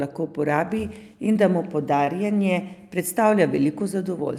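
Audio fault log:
1.33–1.37 s and 2.05–2.09 s, short concealed packet loss: twice, about 20 ms of the speech stream failed to arrive at the decoder in time, and the receiver synthesised a stand-in, roughly 14 ms at the first gap and 21 ms at the second, by extending the preceding sound's pitch or noise shape before crossfading back to real audio. Each gap is heard as a brief smear or wobble, and a short consonant there may drop out.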